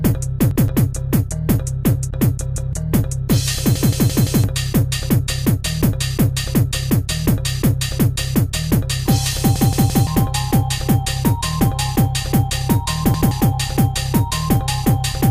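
Repeated buffer stutters at 0.51, 2.56, 3.76 (four extra plays), 9.56 (three) and 13.14 s (one each). Audio arrived late, so the last 0.17 s block replays. These show as identical waveform copies with hard vertical seams on the spectrogram.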